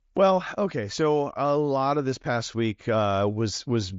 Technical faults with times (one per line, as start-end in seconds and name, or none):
none